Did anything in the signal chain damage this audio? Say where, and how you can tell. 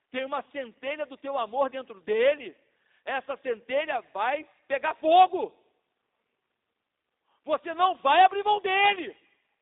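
Yes, the codec stage, across the whole clip. It's G.729 compression, and the sound fits an 8 kbit/s call: nothing above 3.7 kHz, thin lows below 250 Hz, and a plainly rough, buzzy synthetic edge, because the coder rebuilds speech from a filter model and sparse pulses rather than sending the waveform.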